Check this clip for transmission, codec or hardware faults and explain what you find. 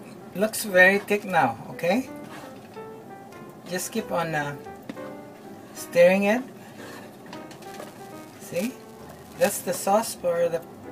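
One fault is present: buffer tearing from 7.6 to 9.7 s. Write and read pointers cross each period, splicing in a small sliver of audio roughly 10 ms old, producing a 345 Hz rattle, which fits a 128-sample buffer.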